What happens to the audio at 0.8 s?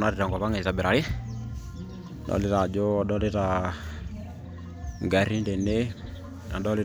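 At 0.8 s the speech carries on cleanly, with no dropout, click, distortion or other fault at that moment.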